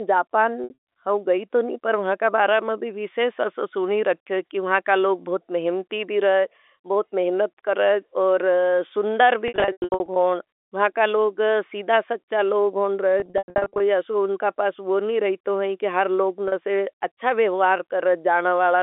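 Packet loss with pitch repetition occurs at 0.64–0.76 s, 9.48–10.16 s, 13.2–13.8 s and 16.48–16.52 s. Each gap is bridged by repeating the last pitch period, giving a held, buzzy tone. The 100 ms runs within the middle two bursts fade toward silence before the speech cross-fades back.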